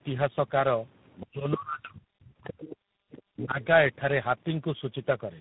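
Speech that crossed several network links, each re-encoding it with its own speech codec, shows tandem speech coding throughout the 5-second recording. The sound points to three separate speech coders in a row, fitting a chain through GSM full rate, G.729A and finally G.726 at 24 kbit/s, with plain G.711 hops between them. Each coder works on the previous one's already damaged output, so the artefacts compound: the voice comes out rough, muffled and warbly, and nothing survives above 3.8 kHz.

An echo canceller that likely did not fully remove the far end's loudspeaker sound from the microphone lets the other side's voice leak through in short scraps. These fall at 1.20 to 1.26 s, about 20 dB below the talker, then at 2.44 to 2.76 s and 3.38 to 3.43 s, each about 15 dB down.

When both sides talk at once, the canceller, likely unable to separate its own talker from the echo, turns everything down, and the talker's speech is suppressed in double talk. 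From 1.25 to 2.59 s the voice dips for roughly a second in total, falling by as much as about 40 dB at its deepest. Between 3.34 and 3.58 s it drops again by about 20 dB.

While the far end was playing, the canceller also clamped the microphone hard, producing background gated by the echo canceller. From 2.87 to 3.06 s the room sound drops by about 40 dB, leaving a brief hole of near-silence before the ambience returns.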